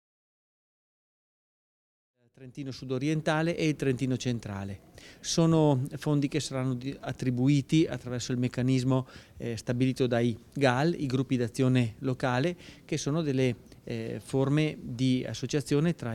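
No technical faults are audible; the level rises in a smooth, deliberate fade-in from around 2 s to 3.61 s, with no click or hard edge.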